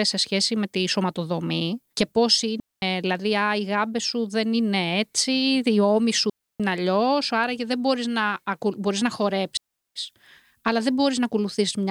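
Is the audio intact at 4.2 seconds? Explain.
Yes, the audio is intact at 4.2 seconds, with no fault heard at that moment.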